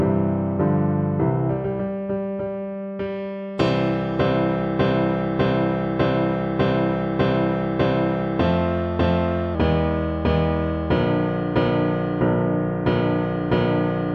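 From 9.55 s to the end at 14.14 s, the audio suffers a wrong sample rate fault: the samples are clocked out slower than they were captured, with no resampling. The ratio fits 48 kHz material played at 44.1 kHz, so timing and pitch shift together. The sound slows to about 0.919 of its proper speed and drops about 1.47 semitones, giving that final stretch a heavier, dragging, lowered quality.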